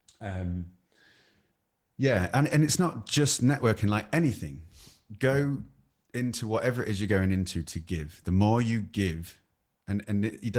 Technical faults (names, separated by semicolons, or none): Opus voice compression